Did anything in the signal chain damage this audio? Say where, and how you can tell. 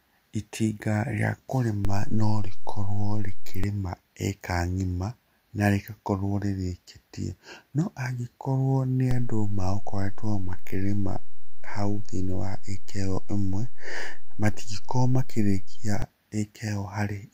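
Yes. A DC step at the converter shifts the zero line by about −17 dBFS from 1.85 to 3.64 s and about −18 dBFS from 9.11 to 16.02 s, each edge thumping under unchanged speech.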